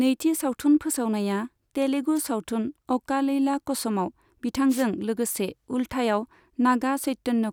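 Two short bursts of static cut through this speech clip, at 2.15 to 2.20 s and 4.69 to 4.84 s, as wireless microphone noise hits where the FM radio link faded and receiver noise swelled over the signal.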